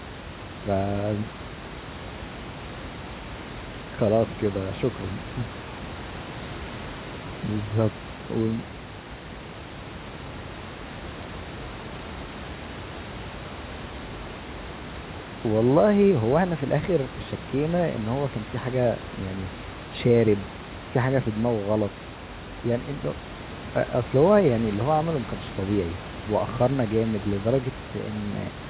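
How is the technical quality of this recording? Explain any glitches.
No glitches to speak of here: the speech comes through a phone-style call path whose G.711 coding leaves nothing above 4 kHz, and the room's own background noise sits about 13 dB beneath it, both just part of how the recording was made.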